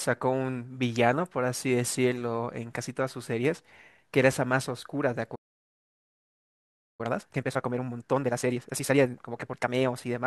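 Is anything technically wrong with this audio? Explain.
Yes, the speech breaks off and then comes back hurried.

Playback stall, 5.35 to 7.01 s: the player most likely ran out of buffered data or had its output thread blocked, so nothing reached the output. The speech stops mid-flow for about 1.6 s of silence, then resumes.

Time-compressed catch-up, 7.01 to 10.01 s: to work off the backlog left by the stall, the player removes short slices and cross-fades across the joins, running about 1.5 times faster. The speech sounds rushed at normal pitch.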